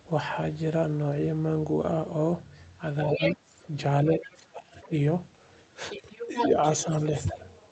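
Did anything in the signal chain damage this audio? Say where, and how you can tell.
Yes. The damage sits in call processing, at the echo canceller. The talker's speech sinks in level while a second voice is present. At 3.07 to 3.40 s it drops by about 10 dB. At 4.14 to 4.93 s the dip is deepest, around 25 dB. At 6.02 to 7.14 s it falls by about 10 dB again. This is speech suppressed in double talk. The likely cause is the canceller failing to tell the near talker from loudspeaker echo. It then turned both down.

The other side's voice leaking through is the second fault, from the same stage. From 3.12 to 3.66 s a second voice is roughly as loud as the talker. Faint scraps follow at 4.22 to 4.46 s and 4.79 to 4.88 s, about 20 to 25 dB down. From 5.90 to 7.46 s it returns only slightly below the speech. Likely the device plays the far end aloud, and the canceller left part of it in the microphone signal.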